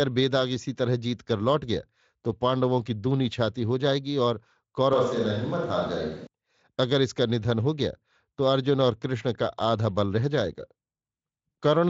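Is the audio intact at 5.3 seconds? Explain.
No. From 4.93 to 6.27 s the sound turns abruptly roomy and hollow with thinner bass, likely a switch to a distant microphone. The sudden jump in and back distinguishes it from gradual reverb.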